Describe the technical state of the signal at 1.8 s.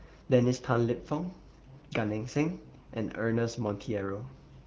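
At 1.8 s the speech is intact, carried cleanly by the AMR wideband (HD Voice) codec with no fault present at that moment.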